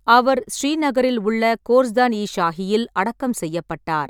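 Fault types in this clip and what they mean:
No technical faults are audible in this speech recording.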